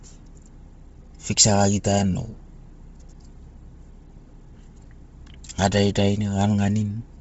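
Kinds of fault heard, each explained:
Bluetooth LC3 compression: The speech has a breathy, grainy edge, with the upper band sounding hissy rather than detailed and nothing at all above about 7.7 kHz, and the heavy damage persists throughout. This is likely LE Audio's transform codec squeezed to a low rate, fitting around 24 kbps with 7.5 ms frames. It discards much of the high spectrum and patches the gaps with synthetic noise, producing that rough, airy texture.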